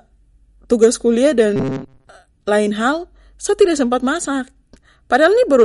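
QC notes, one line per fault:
Throughout: MP3 compression. The speech sounds watery and swirly, with nothing above about 11.2 kHz, which fits a low bitrate around 48 kbps, the likely cause. Starved of bits, the encoder cuts the treble at a fixed point and drops weak frequency lines, which then flicker in and out from frame to frame. That leaves s sounds chirpy and metallic and softens the attacks of consonants, and the damage is plainly audible across the whole clip.
0.73 to 0.86 s, 3.61 s, 5.14 to 5.62 s: hard clipping. Peaks went past what a stage in the chain could pass and were cut flat, overdriven by about 4 dB in the first run and about 2 dB in the other two. The flattened tops throw harmonics high up the spectrum, so the loud moments crackle. The single event at 3.61 s is a brief tick, while the last run near the end is a longer stretch of crackle.
1.56 to 2.15 s: robotic sound from repeated short buffers. 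New audio likely arrived too seldom, and the gaps were filled by looping the latest slice while the real signal was skipped, with most of this stretch made of repeats. The loop forces a steady 134 Hz buzz, which fits a repeated block of about 7.5 ms, so the speech becomes a rigid metallic drone that only loosely tracks the words.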